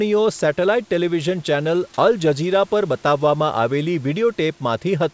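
No technical faults are audible.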